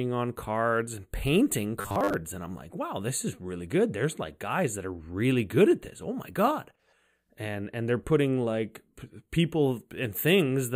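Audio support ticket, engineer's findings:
Robotic sound from repeated short buffers, 1.81 to 2.15 s, just after "on cards and painting". Rigid metallic buzz at 100 Hz, which fits a 10 ms buffer looping. Most of the span is repeated material, the real audio skipped. Likely cause: playback buffer underrun with the last buffer reused to fill gaps.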